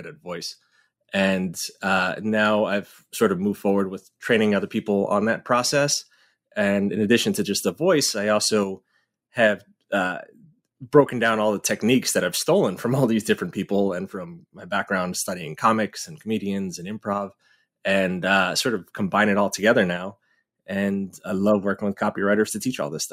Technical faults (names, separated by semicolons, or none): none